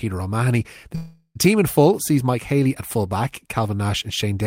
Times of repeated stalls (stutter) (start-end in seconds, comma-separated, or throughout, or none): none